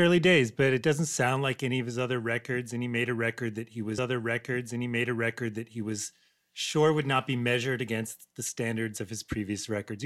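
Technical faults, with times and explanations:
3.97 to 5.97 s, stream segment repeated: about 2.0 s of speech plays a second time because the player fetched or queued the same chunk of the stream twice. The jump back to the segment's start leaves a small audible seam, and the timeline runs 2.0 s longer.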